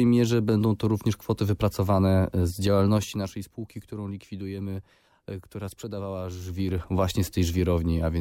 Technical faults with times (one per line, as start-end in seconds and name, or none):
2.88-3.44 zipper noise
6.41-6.87 zipper noise